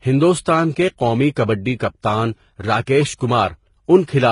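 Speech runs throughout with stacked compression damage that likely comes from transcoding between lossy codecs: a very low-rate HE-AAC encode, then a Vorbis encode at only a modestly higher rate. Nothing sounds above 10.5 kHz. Unlike a single low-bitrate encode, two distinct artefact textures coexist: the smeared, synthetic upper band of the first codec, then the second codec's own artefacts layered on top. The second codec spent its bits re-encoding the earlier flaws.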